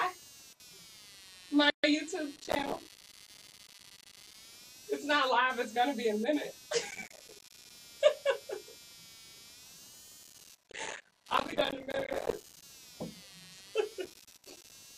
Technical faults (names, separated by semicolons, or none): computer activity noise; gap at a join of encoded pieces; processor overload crackle